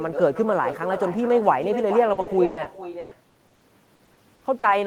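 Throughout the speech, an echo with no canceller is audible. The far end's loudspeaker feeds its microphone, and nothing removes the returning signal. Every phrase is shadowed by a thinner copy, about 10 dB quieter, arriving roughly four tenths of a second later.

From 2.13 s to 4.65 s, repeated packet loss gives a robotic sound. The stream keeps dropping out in short holes, the longest 120 ms. Each hole is patched by stretching the last sound. About 30 percent of this stretch is filled that way, so it sounds choppy, with pieces missing.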